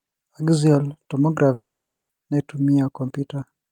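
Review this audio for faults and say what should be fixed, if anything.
From 1.53 s to 2.11 s the speech breaks off: the last sound is stretched into a fading buzz, then roughly half a second of silence follows before the audio resumes further on, with about 0.56 s of material simply gone. That pattern points to a long network dropout as the likely cause. A brief packet loss would be smoothed over without the silent tail, and a plain mute would leave no fading buzz. A larger jitter buffer with redundancy or retransmission would prevent it.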